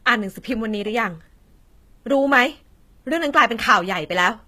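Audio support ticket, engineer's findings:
Speech, entire clip: metallic, gritty, lispy sibilants; treble harmonics not lining up with the voice below; nothing above 14.9 kHz. Likely HE-AAC compression, band replication copying lower bands upward, fits about 20 kbps. Unlike plain low-bitrate coding, treble synthesized, not dulled.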